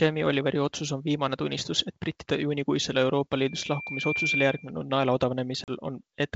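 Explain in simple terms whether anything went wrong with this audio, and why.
Two things go wrong here. From 3.46 to 4.72 s there's loudspeaker feedback squeal: the microphone is picking up the speaker it's feeding, and one pitch, around 2.4 kHz, keeps going round the loop and getting louder. You can hear it swell over most of a second until it's about as loud as the speech, a whistle sitting right on top of everything.

Then at 5.64 s there's packet loss on an ADPCM call. About 40 ms of audio vanishes, which fits a couple of lost packets, leaving a sharp-edged gap of silence until 5.70 s. The catch with this kind of coding is that the receiving end predicts each bit of sound from what came before, so when chunks go missing it loses track. The speech right after the gap comes back with a little roughness before it settles. The wideband phone coding itself sounds clean, with just the normal telephone character.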